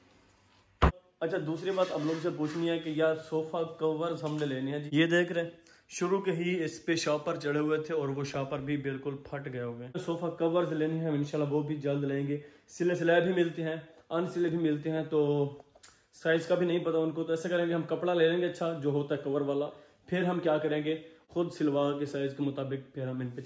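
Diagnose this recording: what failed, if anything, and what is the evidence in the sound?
Nothing failed: the sound gives no evidence of a fault at any stage of the chain.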